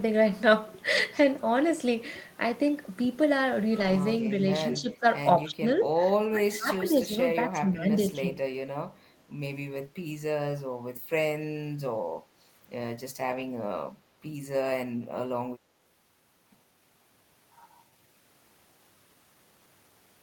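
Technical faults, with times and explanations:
0.97, 3.79 to 3.97, 6.73 and 13.31 to 13.41 s, lost packet rebuilt from error correction: the speech never gaps but briefly turns rough and noisy. Each time the decoder played a low-bitrate copy carried in the next packet. The rebuilt stretches last 20, 100, 20 and 60 ms, which fits one, five, one and three lost packets.
4.73 to 8.25 s, speech suppressed in double talk: the speech repeatedly dips or thins at 4.73 to 5.05 s (about 15 dB), 5.43 to 5.64 s (about 20 dB), 5.90 to 5.95 s (about 10 dB), 6.31 to 7.92 s (about 15 dB, for roughly a second in pieces) and 8.14 to 8.25 s (about 5 dB). This is likely an echo canceller ducking both talkers while they overlapped.
8.98 to 9.21 s, echo leak: a very faint delayed copy of the speech trails it by 218 ms, roughly 40 dB below the direct sound. This is likely loudspeaker pickup at the far end that its echo canceller failed to remove completely.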